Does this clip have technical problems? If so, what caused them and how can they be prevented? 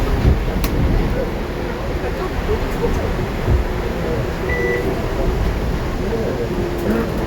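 No, the sound arrives intact, with no dropouts, distortion or other technical faults anywhere in the recording, so there is nothing here that needs preventing.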